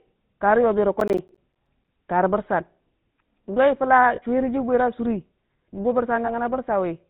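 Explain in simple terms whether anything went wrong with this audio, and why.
The whole clip went through the GSM full-rate codec, an old phone coder. It cuts everything above 4 kHz, so the speech sounds buzzy and gravelly.

From 1.00 to 1.88 s there is processor overload crackle. The computer fell behind, roughly fifteen times, and each time left a tiny gap of silence. Together the gaps crackle.

Lost GSM frames occur at 4.16 to 4.21 s and 6.26 to 6.31 s. Each time, one missing 20 ms piece was patched by repeating earlier sound, which leaves a brief metallic ring.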